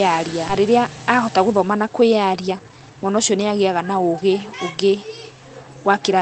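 At 0.49 to 0.51 s a skip ahead occurs: about a second of queued audio is discarded and playback jumps straight forward with no fill, joining the two sides abruptly. From 0.59 to 4.54 s a jitter buffer speed-up trims short pitch-period segments repeatedly, running the speech at about 115% speed at unchanged pitch and removing roughly 0.7 s.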